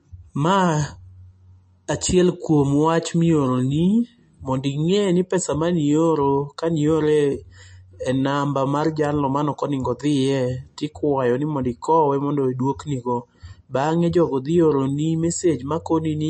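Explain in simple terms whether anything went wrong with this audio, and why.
The speech sounds watery and dull from start to finish, with nothing above about 8.4 kHz, most likely from heavy MP3 compression. A simple treble cut wouldn't add that swirl.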